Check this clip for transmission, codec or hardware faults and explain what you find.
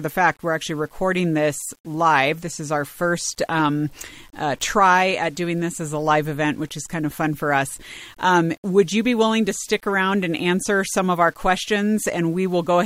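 One fault runs through the whole speech clip. Low bit depth without dither: grainy distortion tracks the signal, about 35 dB below it, likely from rounding to roughly 8 bits without dither.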